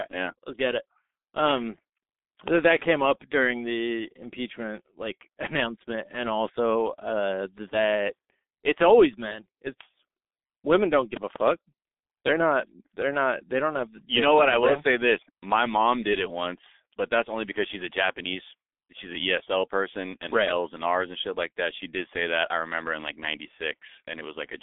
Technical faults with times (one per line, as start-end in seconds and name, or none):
0.00-24.63 G.723.1 codec
2.48-2.60 loud pop
11.17-11.38 loud pop